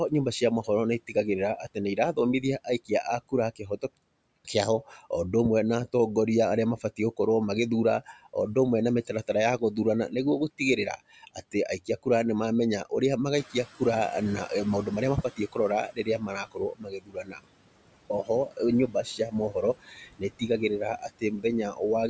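Speech recorded through call microphone processing, with nothing above 8 kHz, shows noise suppressor artifacts throughout. The suppressor pulls steady noise down by about 21 dB, so the floor sinks between phrases and swells under them. On a spectrogram this looks like a patchy, flickering background that darkens in pauses. Speech cut by the noise suppressor occurs from 0.09 to 5.05 s (deepest about 21 dB), from 6.78 to 7.19 s just after "na atongoria arĩa" (about 14 dB), from 8.01 to 12.07 s (about 17 dB), from 14.47 to 17.45 s (about 22 dB) and from 18.1 to 21.81 s (about 19 dB). Across these stretches, consonants and word endings are swallowed for roughly 3.8 s in total. The waveform shows them as clipped-off tails, and the spectrogram shows thinned high-frequency fricative energy. The noise suppressor catching up is heard when the room noise jumps by around 11 dB near 13.5 s. The louder background comes through at first and then fades over 13.37 to 16.26 s, taking 2.89 s to reach about 17 dB of reduction. 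This appears as a bright band of noise that gradually dims.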